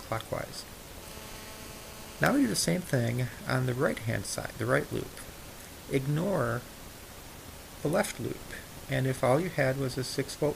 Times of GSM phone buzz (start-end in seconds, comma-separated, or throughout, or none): 1.03-2.59